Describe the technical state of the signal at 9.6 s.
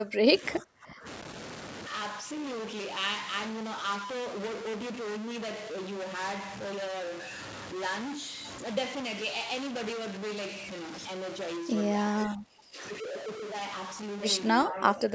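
At 9.6 s the speech carries a stuck bit fault, present throughout the clip rather than at this moment alone. The likely cause is one data bit held at a fixed value, so about half the samples are off by that bit's weight. The result is grainy noise if a low bit is stuck or harsh, buzzy distortion if a high one is, with noise filling the pauses. Nothing above 8 kHz comes through, in line with the call microphone processing.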